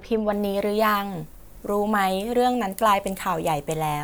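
Pre-emphasis left on from 0.33 s to the end: the treble boost was never de-emphasised, leaving 10 kHz about 14 dB above 1 kHz, so the speech sounds thin, bright and sibilant.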